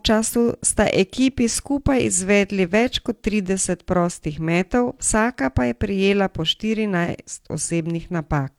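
No technical faults can be heard in the speech at any point.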